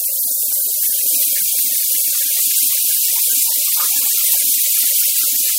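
No technical faults can be heard anywhere in this audio.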